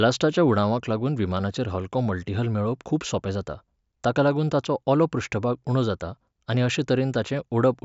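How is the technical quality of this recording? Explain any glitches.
No technical faults can be heard.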